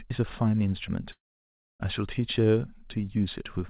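A long network dropout runs from 1.12 s to about 1.82 s. For roughly 0.68 s no audio is heard as it was spoken: the last sound is stretched into a brief buzzing tail that fades, then about 0.61 s of near silence follows before the speech resumes with that stretch missing. This is likely packets failing to arrive, with the receiver's concealment filling the gap and then giving up. Through the call path nothing sounds above 4 kHz, which fits a G.711 mu-law codec at 64 kbps.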